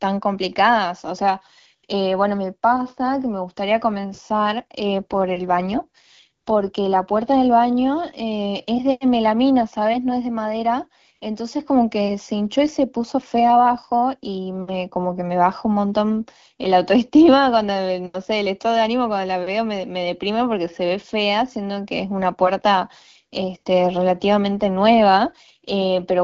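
From 4.98 to 6.95 s, and again from 24.13 s to the end, there's an AMR rate drop. The speech turns rougher and more synthetic but keeps the same bandwidth with no gap, which fits the codec stepping down from 12.65 to 8.85 kbit/s on a weak link.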